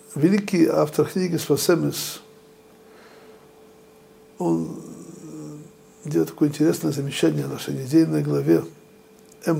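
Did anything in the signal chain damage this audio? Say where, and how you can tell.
No, nothing in the chain audibly damaged this audio.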